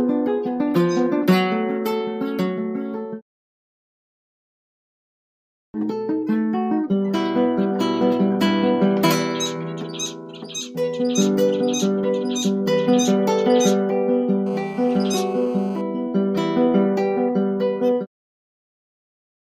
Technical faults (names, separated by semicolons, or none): GSM phone buzz